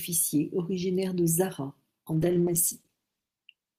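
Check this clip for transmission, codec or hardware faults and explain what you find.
One transmission fault is present: a call bitrate drop. It starts at 2.16 s and lasts to the end of the clip. The encoder's rate falls from 48 kbps to 13 kbps and stays at that floor for about 1.3 s. A falling bandwidth estimate forced the Opus encoder to spend far fewer bits. It codes the speech more coarsely and trims the upper frequencies. The speech turns rough, watery and muffled, and doesn't recover before the clip ends.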